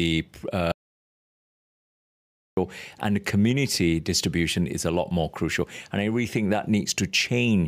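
At 0.72 s the speech cuts off abruptly into dead digital silence, with no room tone at all, and resumes at 2.57 s. This is an audio dropout to silence lasting about 1.85 s, likely from the input briefly failing while zeros were written.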